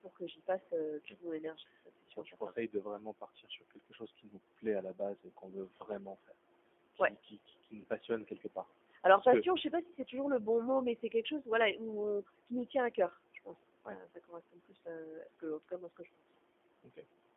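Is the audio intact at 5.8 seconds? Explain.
No. At about 5.78 to 5.84 s there is VoIP packet loss concealed by the speech codec. Roughly 20 ms of audio went missing, which fits one lost packet. The decoder filled the gap by extending its last pitch and filter settings at falling gain. This gives a short buzzy or noisy smear, and the sound stays weak or distorted for a moment after the gap.

The same moment falls inside speech cut by the noise suppressor, from 0.03 to 6.33 s. In total, about two seconds of speech were treated as noise and pulled down, by about 17 dB at the deepest. Soft consonants and word endings sound swallowed and faint.

Noise suppressor artifacts run through the whole clip. The suppressor lowers bands it judges to be steady noise, cutting by about 18 dB. The residue sinks between phrases and rises under them.

The G.729 codec is also present throughout. The band is limited to about 250 Hz to 3.5 kHz. 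The rough, synthetic texture fits G.729A at 8 kbit/s, which rebuilds speech from a filter and sparse pulses.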